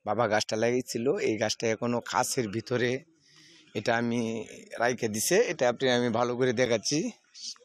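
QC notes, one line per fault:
6.65 s, gap between stream segments. A brief hole of about 6 ms cuts into the sound with hard edges on both sides. Two segments of the stream do not quite meet in time, so the player pads the missing moment with silence. Its position fits a boundary in 2-second segments. Nothing is lost from the audio. It occurs once here.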